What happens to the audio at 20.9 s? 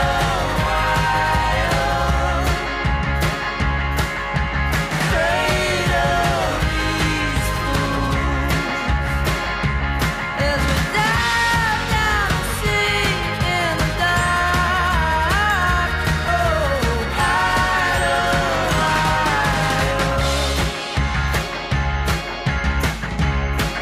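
Nothing goes wrong at 20.9 s; the audio plays through that moment intact, with no dropout, click, distortion or other fault.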